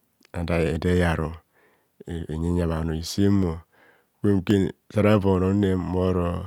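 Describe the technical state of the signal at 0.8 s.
A single sharp click sounds at 0.76 s, a thin vertical line across the spectrum. It is likely dropped samples: about 0.7 ms of the speech is missing, so the waveform jumps straight to a later value, far too briefly to remove any sound.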